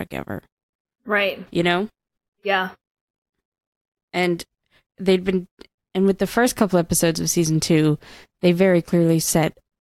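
No technical faults can be heard anywhere in the speech recording, whose signal stays steady and intact throughout.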